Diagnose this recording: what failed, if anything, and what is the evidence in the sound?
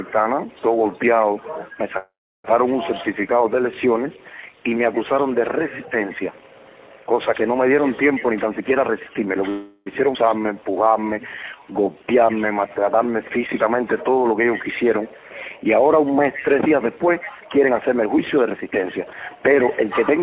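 At the network and jitter buffer stage, a call audio freeze likely occurred twice: packets stalled and the buffer ran dry. At 1.98 to 2.46 s the sound stops and trails into about 0.34 s of silence. At 9.50 to 9.88 s a short fading fill appears. Each time, playback resumes where it left off, so nothing is lost.

The jitter buffer speed-up happens three times, as the receiver trimmed pitch periods to shrink excess delay. From 8.31 to 9.49 s the audio runs at 119% speed, from 13.66 to 14.91 s at 108%, and from 17.20 to 20.11 s at 116%. Pitch stays put while the sound feels hurried, with roughly half a second cut in that last stretch.

A skip ahead at 10.14 to 10.17 s comes from a stretch of audio being dropped, in transit or by the buffer overflowing, while later audio was already queued. Roughly a third of a second is missing, and the two sides are spliced together almost seamlessly, with only a tiny join where the material jumps forward.

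The jitter buffer slow-down runs from 10.39 to 13.38 s. The receiver repeated pitch periods to rebuild its reserve, adding 314 ms in total. Playback drops to 90% speed at unchanged pitch, so sounds are drawn out. All of this sits on the G.711 A-law call path's band limit of 4 kHz.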